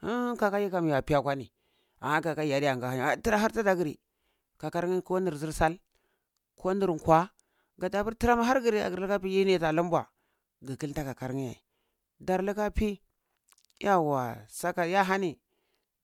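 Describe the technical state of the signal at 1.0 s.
The signal at 1.0 s is intact, with no technical fault audible at that point in the speech.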